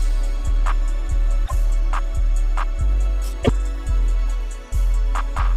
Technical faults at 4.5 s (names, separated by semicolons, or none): none